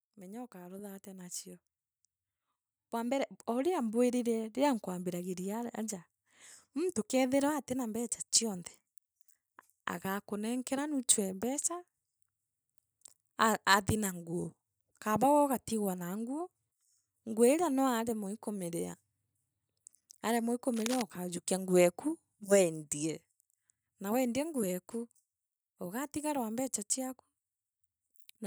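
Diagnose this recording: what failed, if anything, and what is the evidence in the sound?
Automatic gain rising points to the call-processing stage. From 0.05 to 5.79 s the speech and the background swell together by about 11 dB. The gain control judged the input too quiet and raised its gain gradually. Both therefore climb at once.

Cable scratch noise appears from 20.74 to 21.02 s, right after "aremwa ii" and before "ukajukia nguu eku". It sounds like dense, uneven rustling, roughly 10 dB below the speech. The likely cause is a worn cable or connector in the analogue wiring shifting its contact resistance as it moved.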